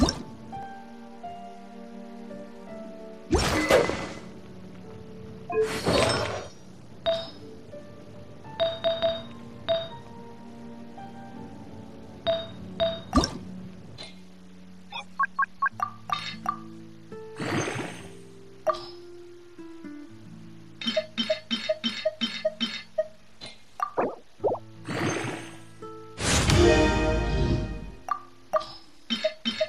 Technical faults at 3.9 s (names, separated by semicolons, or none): none